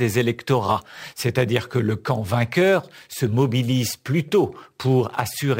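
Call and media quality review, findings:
Imaging from sample-and-hold upsampling, throughout: metallic fizz tracking speech level; mirrored spectrum about -23 dB at 11 to 22 kHz, fitting 22 kHz held to 48 kHz without anti-imaging filter.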